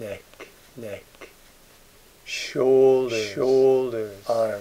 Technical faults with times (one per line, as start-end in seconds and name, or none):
0.00-4.60 doubled audio track